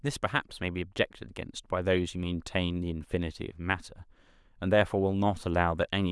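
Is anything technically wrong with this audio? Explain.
No, nothing is technically wrong with this audio.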